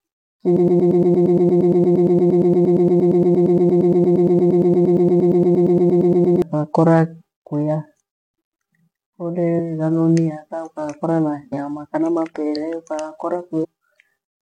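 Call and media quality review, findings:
Broken-record loop, 0.57–6.42 s: one 116 ms speech fragment repeats exactly, back to back, 51 times, stuttering for nearly 6 s. Likely player or stream stall resending its last buffer; the intended audio there is lost.

Damaged data in a compressed stream, 9.58–9.60 s, 11.52 s, 13.63–13.65 s: three brief glitches, each about 20 ms. Corrupted compressed frames: the decoder misreads them, loses sync and skips forward to the next frame header.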